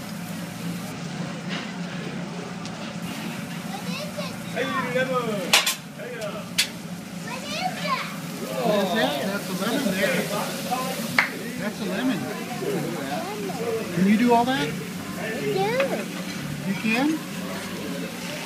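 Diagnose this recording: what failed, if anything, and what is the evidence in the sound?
Channel delay (comb filtering) appears at the driver or buffer stage, from 0.92 s to 3.02 s. Over that span the top end turns dull, with a notch at around 10 kHz. One channel arrives a few hundredths of a millisecond late, which fits an offset of about two samples. When the two channels are summed to mono, their shared content cancels at evenly spaced frequencies. A delay this short pushes the first cancellation high into the treble.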